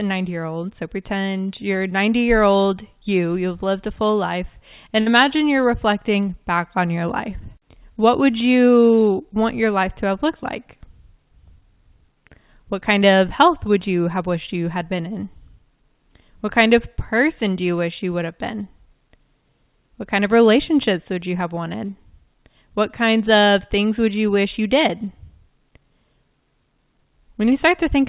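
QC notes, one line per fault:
5.00–5.08 s, burst of packet loss: after "lived a full life", the last sound is extended and faded over the gap, then "you're reflecting back on" resumes with audio missing.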